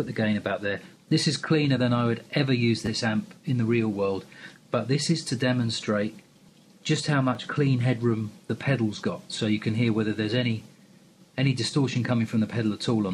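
At 2.86 s fresh audio failed to reach the device in time, so a repeated buffer occurred: the same 10 ms slice played twice more. It sounds like a brief buzz. At 7.35 s one extra repeat gives a single click. Little or no audio goes missing.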